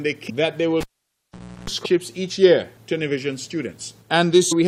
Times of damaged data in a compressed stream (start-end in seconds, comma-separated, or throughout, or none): 0.29-0.31, 1.84, 4.51-4.53